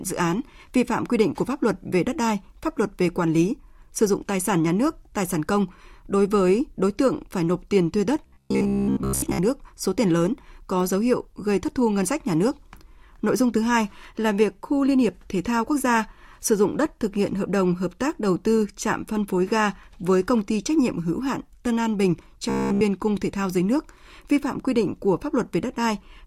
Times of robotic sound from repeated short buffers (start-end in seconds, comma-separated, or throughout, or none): 8.26-9.40, 22.50-22.81